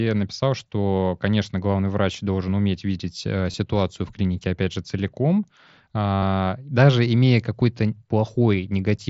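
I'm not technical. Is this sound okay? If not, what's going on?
No. There are two brief glitches in this speech. At 3.51 to 3.54 s, just after "должен уметь видеть э", a tiny blip lasts about 23 ms. At 6.15 to 6.22 s, just before "даже имея", a longer 75 ms stretch turns into a flat, buzzy hum with a slight wobble as the voice comes back. This is concealed Bluetooth headset packet loss. Bits of audio between the headset and the phone went missing, and the phone filled each gap by repeating the most recent sound.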